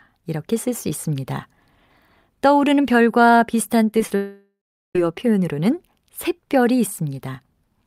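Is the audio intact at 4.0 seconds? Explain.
No. Around 4.0 seconds the speech shows short concealed packet loss in three quick bursts: 3.91 to 3.94 s, at 3.99 s, and 4.07 to 4.11 s. Each gap of 10 to 30 ms of audio arrived too late for the decoder, so the receiver extended the preceding sound to cover it and crossfaded back. The result is a brief smeared, wobbly patch, and a short consonant there may drop out.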